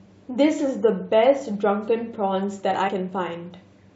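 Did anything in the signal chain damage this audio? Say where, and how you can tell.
Yes: damaged data in the compressed stream, a codec-stage fault, causes a garbled blip from 2.87 to 2.89 s as the decoder misreads frames and loses sync.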